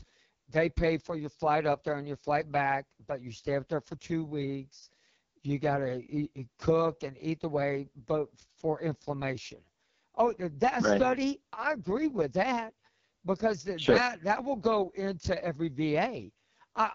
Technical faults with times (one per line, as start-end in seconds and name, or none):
0.00-16.95 AMR wideband (HD Voice) codec